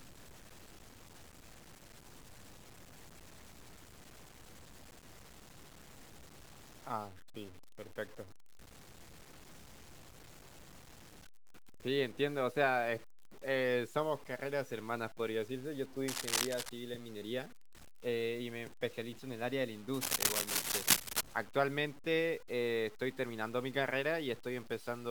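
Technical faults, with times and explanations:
Throughout: low bit depth without dither. The speech has a grainy, rough distortion that shifts with the sound, about 20 dB below the signal. Quiet passages turn gritty or sputter. The likely cause is truncation to about 8 bits, leaving error that tracks the signal.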